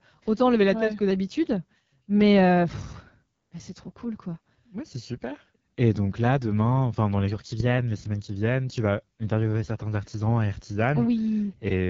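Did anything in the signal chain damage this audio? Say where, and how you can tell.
Yes. Throughout the speech there is a rough, raspy grain, and the spectrum stops dead at about 7.5 kHz, with the top band sounding hissy rather than detailed. That points to the codec stage: the AMR wideband (HD Voice) codec running near its lowest rates, which fits 8.85 kbit/s. At that rate the pulse-driven vocal tract model has too few bits to shape the excitation cleanly, so voicing turns gritty, and the highest band is filled with shaped noise instead of real content.

From 7.27 to 7.79 s, the audio briefly runs about 6.4% fast and rises by about 107 cents, roughly a semitone, then snaps back to normal pitch and pace. Speed and pitch move together and return abruptly, which matches a drift correction step at the buffer stage. This is likely software matching two clocks, changing the playback rate in one jump to drain or refill its buffer for that half second instead of adjusting gradually.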